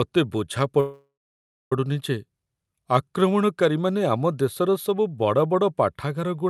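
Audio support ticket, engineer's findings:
Speech halts at 0.80 s: brief buzzy continuation of the last sound, fading to silence for about 0.6 s, resuming at 1.72 s with nothing skipped. Call audio freeze, likely jitter buffer underrun from delayed packets; speech afterwards runs roughly 0.9 s late.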